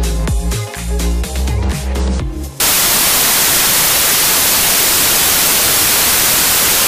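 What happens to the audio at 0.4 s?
Nothing goes wrong at 0.4 s; the audio runs on intact through that moment.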